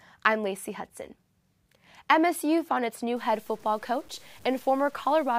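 From 3.16 s, right after "found its new", to the end at 5.39 s, the speech turns grainy with low bit depth without dither. The likely cause is truncation to a coarse word length, consistent with 8 bits, leaving signal-dependent distortion roughly 30 dB down that gritties quiet passages.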